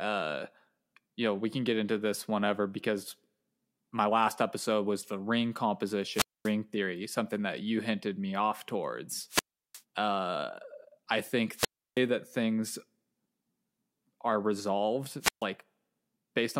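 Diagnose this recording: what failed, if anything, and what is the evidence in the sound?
What failed is the wireless link ahead of the converter, with four wireless microphone squelch dropouts: 6.10–6.53 s, after "episode was the ring" (mute about 0.24 s); 9.28–9.82 s, after "hinted me off towards" (0.36 s); 11.55–12.01 s, before "that things" (0.32 s); and 15.20–15.45 s (0.14 s). Each time, a burst of hiss comes up as the RF fades, the receiver's squelch slams the output shut, and the speech comes back when the signal recovers.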